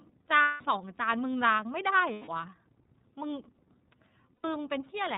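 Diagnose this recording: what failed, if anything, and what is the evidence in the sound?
The codec stage is iLBC narrowband coding. Nothing above 4 kHz survives, and the speech sounds plainly rough and synthetic throughout, which fits 30 ms frames at 13.33 kbps.

On the network side, lost iLBC frames were concealed by looping the last pitch cycle with noise. This gives buzzy held vowels at 0.42–0.62, 2.13–2.29 and 4.37–4.45 s, with clean recovery straight after.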